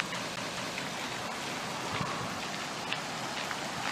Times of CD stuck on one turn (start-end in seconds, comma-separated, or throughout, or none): 0.36-0.78